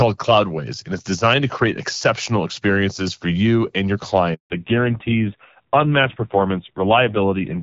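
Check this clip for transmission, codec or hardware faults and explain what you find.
Two faults are audible, both at the same moment in this speech clip.

Handover gap, 4.34 to 4.50 s: right after "for you and your" the speech fades out within a few tens of milliseconds and leaves 160 ms of dead silence before sound resumes. This is what happens when a call is passed from one network cell or technology to another and no speech frames reach the phone during the switch. Whatever was said in that window is simply missing, not muffled.

Fallback to narrowband, 4.50 s to the end: once sound returns it is duller and rougher, with nothing above 4 kHz. The sibilance and air that were present earlier disappear. The call has dropped from HD Voice to an older narrowband codec at the handover. The added roughness fits a low rate around 5.9 kbit/s rather than a higher one. Before the switch, the wideband coding at what sounds like 12.65 kbit/s carries only light codec colouring.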